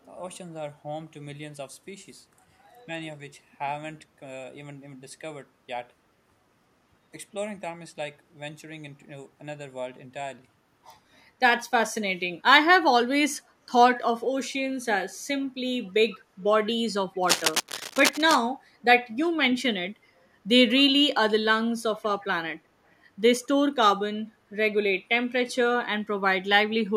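At 15.84 s, a faint delayed copy of the speech appears for a moment. It returns at 16.11 s and again at 23.43 s. Each scrap lasts under a tenth of a second and trails the original by 154 ms. These scraps are an echo leak, sitting far below the speech. The likely cause is a far-end loudspeaker whose echo canceller let part of the microphone pickup slip back into the call.

From 17.23 s to 18.39 s, a dense, uneven scratching rides over the speech. It is loud, close to the level of the signal itself. This is cable scratch noise. A worn cable, connector or control was likely moved, and its contact resistance jumped around rapidly. That jumping turns into irregular bursts of rustle that stop once the movement ends.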